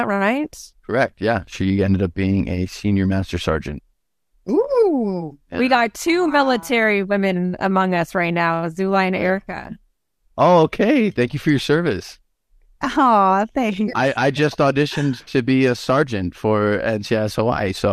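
No technical faults can be heard anywhere in the recording.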